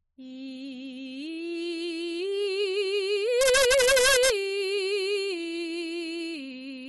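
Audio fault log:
3.41–4.30 s, integer overflow: in this stretch of the music the level is pushed about 2 dB past what the integer format can hold. Instead of being held at full scale, each peak that crosses the limit wraps around to the opposite extreme. The waveform jumps across the entire range in a single sample, producing violent cracks on the loudest moments that sound far harsher and more abrupt than ordinary clipping.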